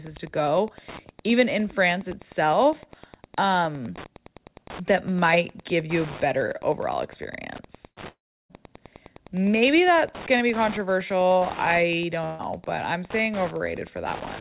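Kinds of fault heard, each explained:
Wi-Fi interference: A nearby Wi-Fi radio is leaking into the audio circuit, which rectifies its bursts into clicks. Here it runs the whole way through as a steady tick about ten times a second, matching the 102.4 ms beacon spacing, with rougher rasps when data traffic picks up. It sits roughly 20 dB below the speech.
Burst of packet loss: A short run of audio packets never made it in time, and the receiver filled the hole by stretching the last sound and letting it fade. At 7.88 s about 85 ms of that fill replaces 90 ms of speech. At 12.25 s, after "to be controversial I", about 144 ms of fill replaces 150 ms before "but I'm saying" picks up. Both times the speech jumps ahead.
Long network dropout: Around 8.09 s to 8.53 s the audio stops arriving, likely because the network connection briefly dropped out. The receiver first carries the last sound on and lets it fade, and then it goes fully silent for about 0.34 s. 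When the speech returns, roughly 0.42 s of it is simply gone. It comes just after the first packet-loss burst.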